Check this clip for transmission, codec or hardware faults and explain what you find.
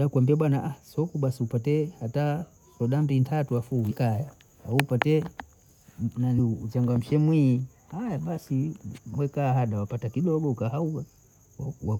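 One codec fault is present. At 6.38 s, compressed frames are skipped. The speech jumps ahead about 200 ms, which fits ten lost 21.3 ms frames.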